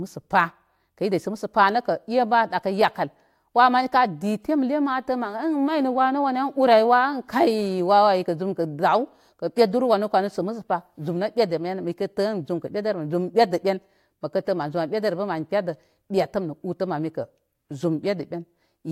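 No technical faults are audible anywhere in the recording.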